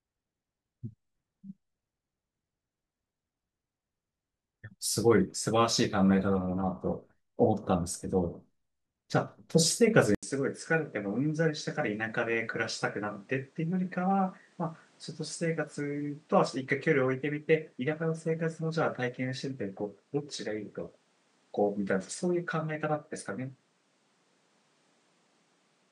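A speech clip. At 10.15 s the sound drops out for 80 ms, then returns duller and about 5 dB quieter. Nothing above 10.5 kHz remains, and a new noise floor sits roughly 35 dB down. This likely comes from the input switching to a poorer device.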